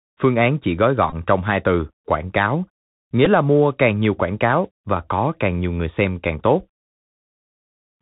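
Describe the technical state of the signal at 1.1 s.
Bluetooth headset packet repeated, from 1.10 to 1.15 s, between "phương án chỉ gói" and "trong hai từ quảng". Lost packets were filled by decoding the previous packet again, which produces a short buzz near 267 Hz. The 22.5 ms gap fits about six lost 3.75 ms packets. Underneath, the Bluetooth CVSD headset codec keeps everything below 4 kHz and adds granular hiss and scratchy s sounds, consistent with a 64 kbps link.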